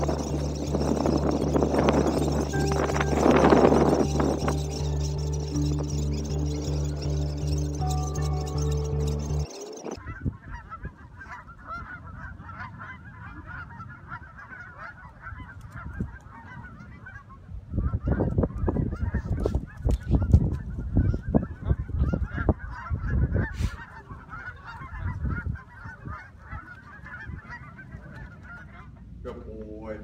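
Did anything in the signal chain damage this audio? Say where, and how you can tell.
Yes. A faint metallic shimmer and dulled top run throughout: imaging from linear upsampling in the rate conversion, 22 kHz to 48 kHz, leaving mirror images at 11.03 to 22.05 kHz about 40 dB down.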